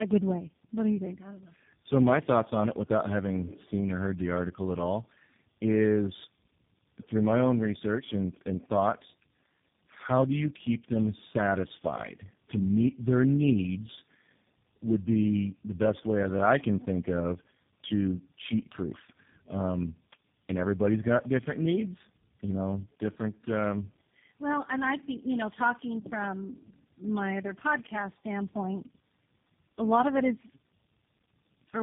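Speech runs through tandem speech coding from start to finish, with nothing above 3.7 kHz and a roughness that builds on itself. The sound fits three low-rate speech coders in a row, likely G.723.1, GSM full rate and finally G.729A, joined by plain G.711 links. A single narrowband codec would sound muffled but steady. Here each stage re-codes the previous one's artefacts, so the warbling and buzzy grit are compounded beyond what any one coder produces.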